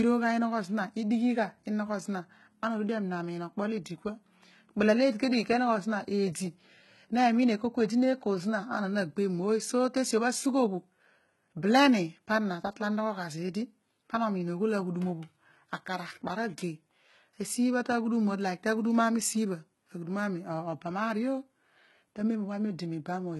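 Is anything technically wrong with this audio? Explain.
Yes. Throughout the speech, the treble appears to have been rebuilt rather than carried: the damage is heavy and is likely HE-AAC compression at a very low bitrate, consistent with roughly 16 kbps. Upper bands are synthesised from copied lower ones, so sibilants sound gritty and metallic, with nothing above 11.8 kHz.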